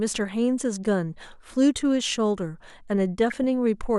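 Weak reception let bit errors slip past DAB error correction, corrupting the MP2 audio data: DAB burbling from 3.28 to 3.44 s brings short noise blips over the speech.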